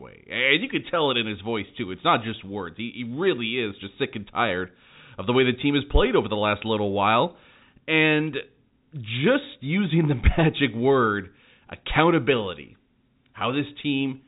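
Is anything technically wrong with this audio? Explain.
No, nothing is technically wrong with this speech. It has passed through G.711 telephone coding, which leaves nothing above about 3.8 kHz and at most a faint, level-following graininess.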